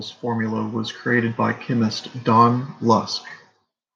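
From 0.2 s to 1.99 s the automatic gain is rising: the gain control judged the input too quiet and raised its gain by about 6 dB over nearly two seconds. Speech and background swell together. The waveform envelope widens steadily, and the spectrogram brightens evenly across all frequencies.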